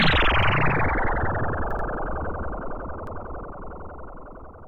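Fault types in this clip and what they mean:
Repeated buffer: fresh audio arrived late, so the last block of about 85 ms played again with a hard join, which fits a 4096-sample buffer. It stutters once at 0.43 s and 3.07 s and twice at 1.71 s, with no silent gap as a dropout would leave.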